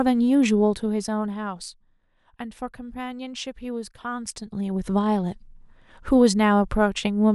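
No technical faults are audible.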